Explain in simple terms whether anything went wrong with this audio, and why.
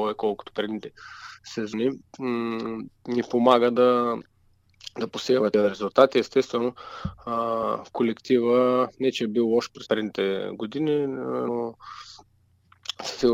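Compressed frames were skipped at 1.72, 5.53, 7.62, 9.85 to 9.87 and 11.47 s. Each time, the audio jumps ahead by a fraction of a second, up to nearly half a second at 9.85 s, in whole blocks about 23 ms long.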